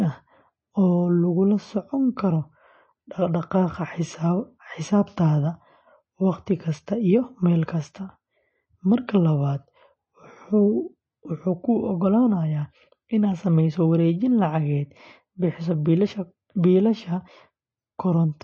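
From start to finish the speech carries plainly audible damage from what is likely MP3 compression. Everything above 8.4 kHz is simply gone, so the top end sounds dull and boxed in. The encoder clearly ran short of bits, which fits a low bitrate of around 32 kbps, so weak frequency lines drop in and out from frame to frame. You hear that as a watery, swirly texture, with chirpy s sounds and smeared attacks.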